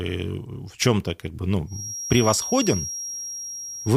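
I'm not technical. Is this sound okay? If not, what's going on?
No. A feedback whistle starts at 1.65 s, right after "как бы", and lasts to the end. It's a thin, steady tone near 5.6 kHz, quieter than the speech. It's likely from a loudspeaker leaking into the microphone, just short of a full howl.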